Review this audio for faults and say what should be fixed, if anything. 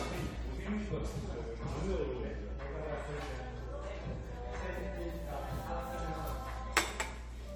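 Generation loss throughout: swirly, smeared and hollow sound with blurred attacks, likely from about seven re-encodes at roughly 96 kbit/s AAC-LC, each adding fresh quantisation noise. Prevent it by keeping a lossless master and encoding to the lossy format only once.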